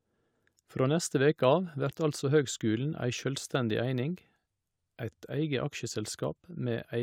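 No technical faults detected.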